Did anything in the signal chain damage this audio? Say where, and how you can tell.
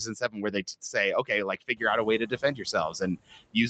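Yes. The damage comes from the call processing stage, specifically its noise suppressor. Noise suppressor artifacts run through the whole clip. Steady background is pulled down by about 21 dB, band by band and frame by frame. You hear the noise floor sink in the gaps and come back up under the speech.

Speech cut by the noise suppressor shows up four times: 0.06–0.64 s, 1.57–1.83 s, 2.19–2.74 s and 3.25–3.56 s. Within each span, roughly 150 to 200 ms of speech is turned down along with the background. The deepest drops are about 17, 18, 13 and 19 dB. Those parts sound swallowed and faint. The suppressor mistook quiet speech energy for noise and removed it.

The noise suppressor catching up runs from 1.76 to 2.58 s. Around 2 s the room noise jumps by about 15 dB. The suppressor's noise estimate lags behind that rise. For about 820 ms the noise comes through with only about 13 dB of reduction. 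Then it sinks as the estimate adapts. The late fade gives it away. The dull top end, with nothing above 8 kHz, fits the Opus call path.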